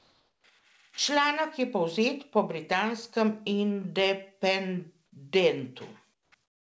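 Discontinuous transmission likely stopped the sender during pauses, so comfort noise in place of the background fills 0 to 0.44 s, 6.14 to 6.32 s and 6.44 to 6.70 s: steady, featureless hiss, about 3, 7 and 17 dB quieter.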